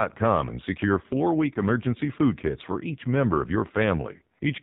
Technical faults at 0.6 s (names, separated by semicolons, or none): AMR narrowband mobile codec